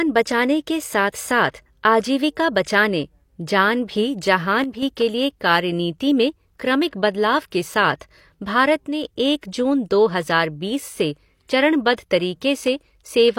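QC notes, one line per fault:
4.64–4.83 s and 8.87–9.03 s, one channel drops out: likely one of two channels carrying identical speech went silent, halving the mono sum, so the level falls abruptly by about 6 dB for 0.19 s and 0.16 s, then returns unchanged.
9.41 s and 11.96 s, pre-echo: the transform codec spread quantisation noise evenly across a block, so noise sized for a sharp attack late in that block filled the quiet before it, heard as a 19 ms hiss leading an onset that sounds soft or smeared.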